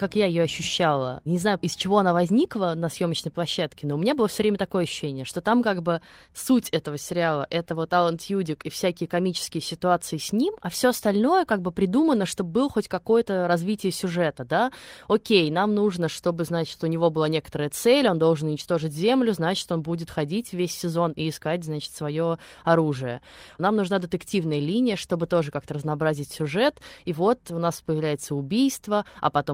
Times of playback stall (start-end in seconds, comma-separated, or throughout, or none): none